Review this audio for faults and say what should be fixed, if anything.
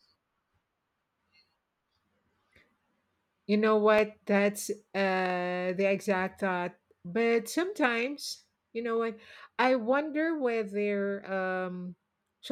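At 3.99 s there's a block of digital silence: about 0.67 ms of zeros, which fits a 32-sample buffer underrun, heard as a click. Keep the audio callback lean so the output buffer always gets filled in time.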